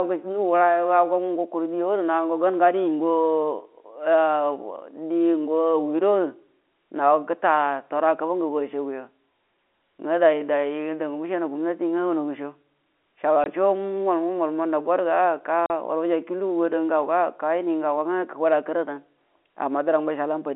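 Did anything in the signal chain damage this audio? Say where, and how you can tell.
Yes, at the network stage: the speech drops to dead silence with hard edges from 13.44 to 13.46 s and again from 15.66 to 15.70 s. That is packet loss filled with silence. The 20 ms and 40 ms gaps point to one and two lost 20 ms packets, muted outright by the receiver.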